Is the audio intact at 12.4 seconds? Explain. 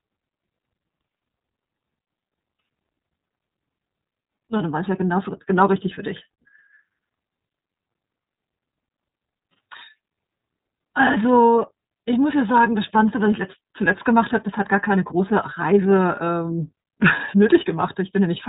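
No, iLBC codec damage runs throughout, including 12.4 s: nothing above 3.8 kHz, a hard spectrogram ceiling, and independently coded frames, likely 30 ms, giving rough, synthetic speech.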